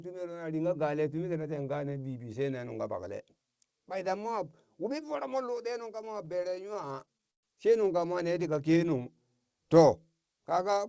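Repeated stalls (stutter), 6.05 to 7.44 s, between "ɗe nung" and "she nungka mo ne": late packets repeatedly emptied the jitter buffer. Twenty stalls were bridged by extending sound, adding 315 ms, up to 121 ms each, so the speech drags and stutters without losing anything.

Jitter buffer slow-down, 8.71 to 9.03 s, just after "nungka mo ne tika": the receiver repeated pitch periods to rebuild its reserve, adding 46 ms and running at 87% speed with unchanged pitch.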